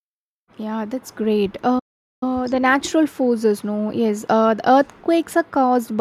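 At 1.79 s the speech cuts out mid-flow and goes dead silent until 2.23 s, a gap of about 426 ms, then picks straight back up. That's a playback stall, most likely the player running dry of buffered data or its thread getting blocked.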